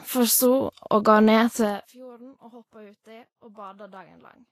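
Low-bitrate Vorbis compression, likely the cause of the damage heard throughout this speech recording, has coded the treble so coarsely that detail turns to grainy, hissy noise, with nothing above 14 kHz; the plainly audible roughness fits a bitrate around 31 kbps. From 1.6 to 1.96 s, a level cut of roughly 25 dB was applied in unsmoothed 1 dB steps, around fifty per second, so each jump leaves a small click and the fade carries a ticking zipper noise while the level falls.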